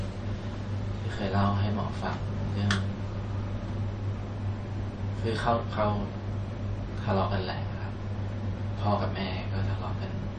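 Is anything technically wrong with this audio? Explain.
Yes. MP3 compression artefacts run throughout the clip. Nothing is present above 9 kHz, and the damage is plainly audible. The likely cause is an MP3 encoder starved of bits, which fits a low bitrate of around 37 kbps. With so little to spend, it removes all treble above a fixed cut-off and discards weaker frequency components that come and go between frames. That leaves the speech dull at the top, with a watery, swirling texture.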